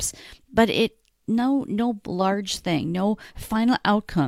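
No technical faults can be heard anywhere in this speech recording. There are no events to place in time, so no timings are given.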